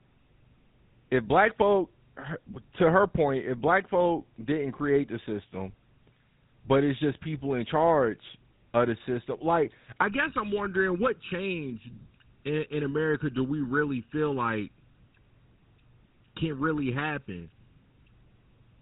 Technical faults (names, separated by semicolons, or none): GSM full-rate codec; channel delay (comb filtering)